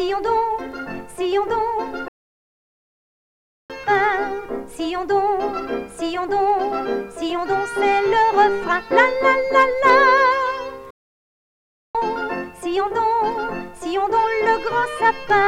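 From 0.13 s right through to the end there's a soft, steady rattle of tiny ticks, roughly twenty a second. These are clock slip clicks, likely from two unsynced clocks drifting apart by around 500 ppm, so a single sample gets dropped or repeated about every 50 ms.

At 2.08 s the sound just cuts out and sits silent until 3.70 s, about 1.6 s. It happens again from 10.90 to 11.95 s, about a second. Both are playback stalls, likely the player starving for data or its thread getting blocked.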